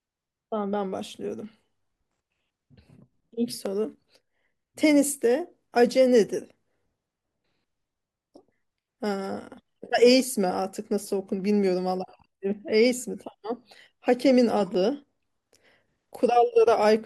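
From about 1.44 s to 16.96 s there's a click roughly every 2.22 s, around seven in all, that points to clock drift buffer slips: likely two devices whose clocks disagree by something like 150 ppm, so each slip drops or repeats a dozen-odd samples.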